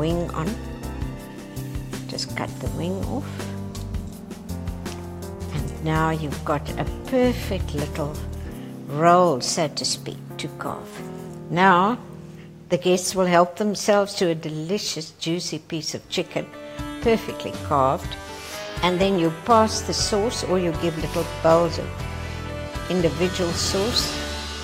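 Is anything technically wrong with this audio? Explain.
Yes. From 9.52 to 11.29 s and again from 18.51 to 19.16 s, the audio runs about 6% fast and a semitone sharp, then snaps back. That's likely a drift correction step, where clock-matching software jumps the playback rate to rebalance its buffer.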